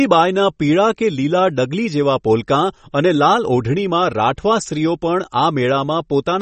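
Throughout, the speech sounds watery and swirly, with nothing above 8.4 kHz; likely MP3 compression at a low bitrate, around 32 kbps. A spectrogram shows a flat ceiling with flickering holes.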